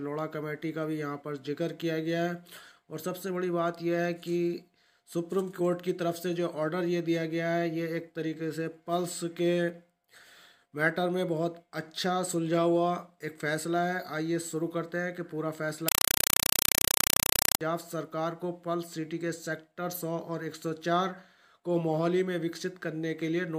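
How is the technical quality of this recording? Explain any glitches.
The recording has one serious glitch, from 15.88 to 17.61 s, where the sound gives way to very loud, chattering static. This is a compressed stream played as audio. A Dolby Digital (AC-3) bitstream, likely around 192 kbps, was passed through as if it were ordinary samples and never decoded. Each 4 ms burst of coded data plays as harsh noise, followed by silence from the zero padding, 31.25 times a second. That strict, machine-regular chatter sets it apart from random interference or codec noise, which has no fixed rhythm.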